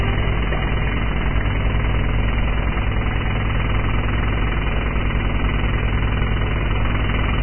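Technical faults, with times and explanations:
Throughout, Vorbis compression, likely at a very low rate: nothing comes through above 3 kHz, and what treble remains is quantised so coarsely that fine detail turns into grainy hiss, with roughened tones and smeared attacks. The heavy damage fits a bitrate of around 11 kbps.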